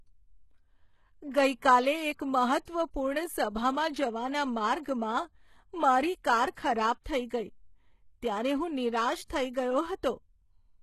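It's a speech clip with plainly audible HE-AAC compression damage all the way through, likely from a very low bitrate, around 16 kbps. The treble is rebuilt from copied lower bands, so the s sounds come out gritty and lispy, with nothing above about 12.3 kHz.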